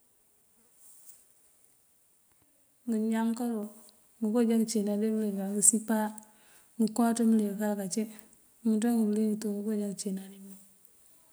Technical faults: microphone volume stepped up

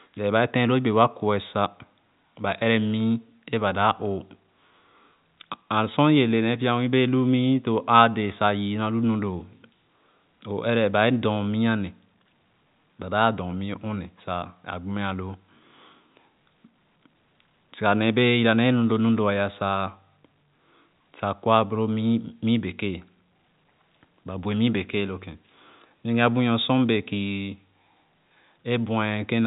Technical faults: none

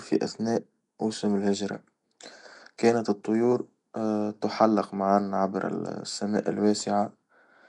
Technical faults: Nellymoser compression

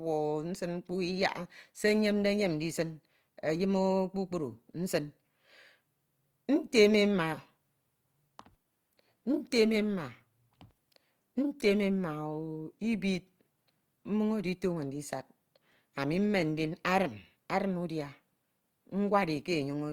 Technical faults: Opus compression

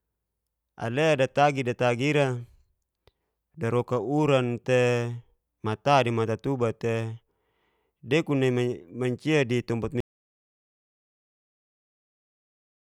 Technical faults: audio dropout to silence

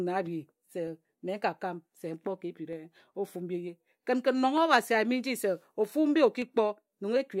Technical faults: clock drift buffer slips

